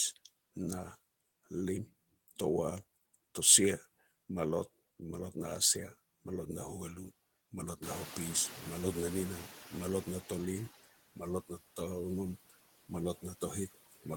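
Right from the start you can hear noise suppressor artifacts. The suppressor is pulling the steady background down by about 15 dB, band by band and frame by frame, so the noise sinks in the gaps between words and swells back up underneath them.

Then, at 7.82 s, just after "huali malot", you get the noise suppressor catching up. Around the 8-second mark the room noise jumps by roughly 20 dB, and the suppressor's noise estimate is still tuned to the old, quieter level. So the louder background comes through with only about 10 dB of reduction at first. Over the next 2.86 s, until 10.68 s, the estimate adapts and you can hear the noise gradually sink back down under the speech.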